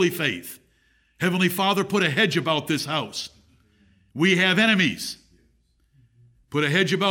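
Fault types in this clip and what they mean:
Nothing to flag here: the speech comes across without any technical faults to point to.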